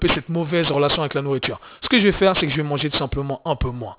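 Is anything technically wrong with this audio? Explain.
Yes. Aliasing runs through the whole speech clip. Content above 4 kHz folds back as unrelated tones, which points to a drop to an 8 kHz rate without anti-alias filtering. Sibilants turn gritty and metallic, with the folded energy fairly strong against the signal. Plain band-limiting would only dull the sibilants, not add these false tones.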